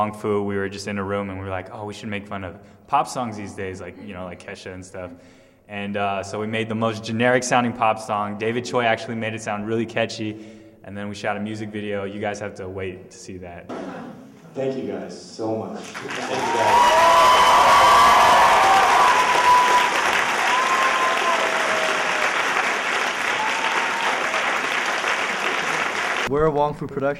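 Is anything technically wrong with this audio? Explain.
Yes. From 18.11 s to 27.12 s a train of clicks, about a hundred regular pulses at 9.3 per second, ticks roughly as loud as the sound itself, likely from electrical interference.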